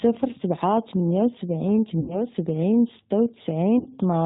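Throughout, the speech has the G.729 codec sound at 8 kbit/s: nothing above 4 kHz, and a rough, synthetic grain from pulse-excited reconstruction that a plain low-pass filter wouldn't add.

From 2.00 to 2.26 s and from 3.79 to 3.88 s comes VoIP packet loss concealed by the speech codec. The decoder stretches the last sound into a buzzy tone or coloured noise that fades, rather than leaving a silent gap as an unconcealed dropout would. The losses run to about 80 ms and 70 ms, and the sound stays weak briefly afterwards.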